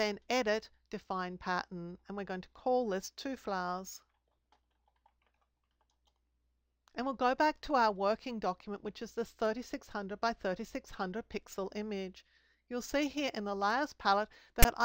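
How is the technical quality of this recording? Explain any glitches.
One glitch stands out, right at the very end. File tags played as audio, from 14.63 to 14.65 s: a block of text tags stored in the file has been decoded as if it were sound. Character bytes make poor waveform values and sit mostly on one side of zero, so the first part comes out as a loud, lopsided rasp. The zero padding after the text then decodes to flat silence. The result is a brief burst of static with hard edges that stops abruptly.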